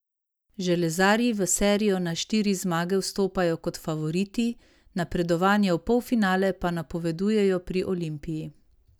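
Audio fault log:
No faults detected in this clip.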